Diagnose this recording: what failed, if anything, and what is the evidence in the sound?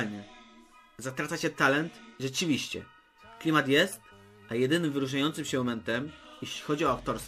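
Nothing failed here: I listened all the way and couldn't find a single point where anything goes wrong at any stage of the chain.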